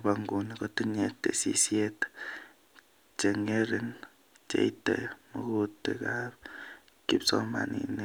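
Nothing stood out as a technical fault on listening to this speech recording.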